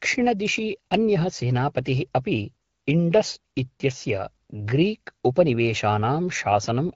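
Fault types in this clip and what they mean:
No fault types are present in this clip; the speech comes through the AMR wideband (HD Voice) codec at 12.65 kbit/s, which is working as intended.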